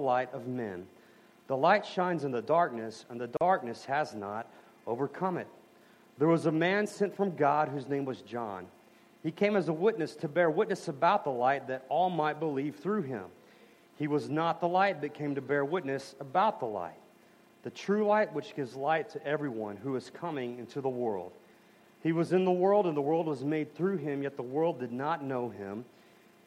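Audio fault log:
3.37–3.41 s: gap at a join of encoded pieces. A 40 ms silence cuts into otherwise continuous sound, with edges softened by codec smearing. The audio then resumes exactly where it left off, with nothing lost. This is the signature of two separately encoded segments butted together untrimmed: the encoder's start-up delay and the padded final frame both remain at the seam, inserting dead air.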